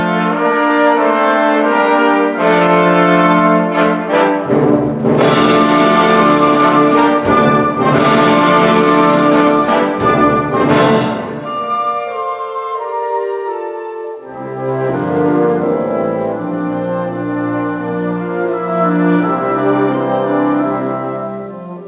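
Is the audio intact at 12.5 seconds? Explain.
No. Gain pumping runs through the whole clip, including 12.5 s. The level swings by roughly 5 dB, pulled down on each loud sound, squashing the dynamics. The likely cause is input gain set far too high, with a fast limiter pulling it down.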